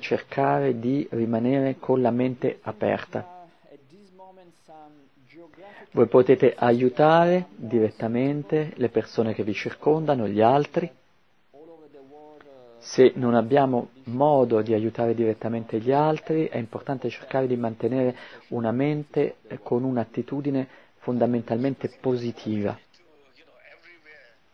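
No technical faults can be heard anywhere in this recording.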